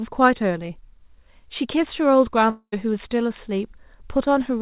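At 2.5 s the speech breaks off until 2.74 s. A fading buzz fills the gap, then brief silence, likely a long network dropout losing about 220 ms of audio.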